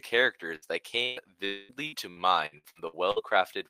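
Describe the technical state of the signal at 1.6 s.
At 1.6 s you're right in the middle of what sounds like a long network dropout, running from about 1.45 to 1.72 s. The speech stops and the last bit of sound gets stretched into a buzzy, hissy tail that fades over roughly a quarter of a second, with no true silence. That's likely the receiver covering for a stretch of audio that never arrived. When the speech resumes at 1.72 s, that missing chunk is simply gone.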